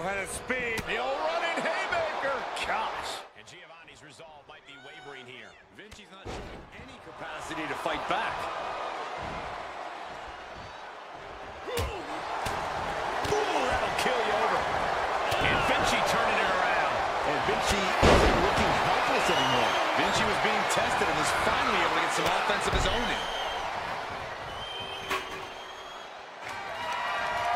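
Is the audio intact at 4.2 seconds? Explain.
Yes, at 4.2 seconds the audio plays through cleanly, with no dropout, click, distortion or other fault.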